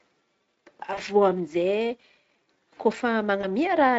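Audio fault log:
0.93 to 1.01 s and 3.41 to 3.46 s: VoIP packet loss concealed by the speech codec. About 40 ms, then 20 ms, go missing, which fits two 20 ms frames and then one. The Speex decoder papers over each gap by stretching the last sound into a short, fading buzzy tone or coloured noise.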